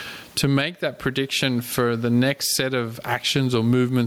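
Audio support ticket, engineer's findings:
Gain pumping throughout. Gain swings roughly 20 dB. Likely mic gain far too high, fast limiter clamping.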